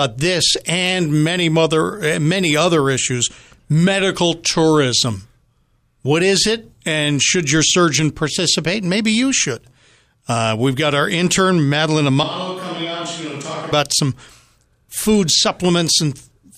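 A speech recording in which, from 12.23 to 13.72 s, the voice abruptly turns roomy and hollow with thinner bass, drops about 10 dB over more background noise, then snaps back. This is likely a switch to a distant microphone after the close one dropped out.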